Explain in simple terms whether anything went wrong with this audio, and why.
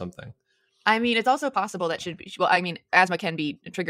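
Something did go wrong. From about 1.07 s to the end of the clip, the speech suddenly speeds up to roughly one and a half times its normal pace, yet the pitch stays where it was. That's a time-stretched section. It's likely that software squeezed this part to fit a shorter length, keeping the pitch steady by dropping short slices of the audio. That's why it sounds rushed instead of higher, like a sped-up tape would.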